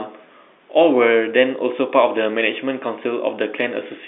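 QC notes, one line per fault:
No faults heard.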